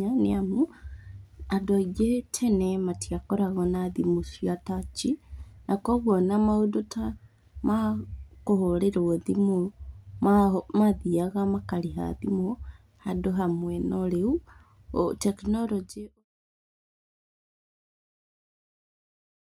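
No technical faults are audible in this speech recording; the only level change is a deliberate, gradual fade-out starting at about 15.5 s and finishing at 16.25 s, with no click or hard edge.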